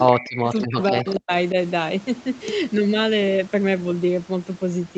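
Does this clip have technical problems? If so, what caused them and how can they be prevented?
Yes. There is an echo leak from 0.06 to 0.83 s and from 1.06 to 1.19 s. A copy of the speech returns 253 ms late, about 15 dB and then about 20 dB below the direct speech. The likely cause is a loudspeaker whose echo canceller let residual pickup through. Headsets or a better-converged echo canceller would prevent it.

Speech is suppressed in double talk from 0.09 to 0.47 s and from 0.67 to 1.32 s, with the speech falling in pieces by roughly 40 dB. The likely cause is that the echo canceller could not separate the talker from the echo and turned both down. Stronger double-talk detection, or headsets that remove the echo, would prevent it.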